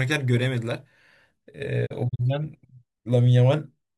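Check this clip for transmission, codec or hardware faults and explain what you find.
One transmission fault is present in this speech clip.

Digital broadcast dropout, 1.85 to 2.21 s: the receiver muted while corrupted frames failed, leaving short silent holes totalling 96 ms across about 320 ms, none longer than 32 ms, which fits three lost frames. Each gap fades out over 20 ms, and the speech sent during the holes is gone.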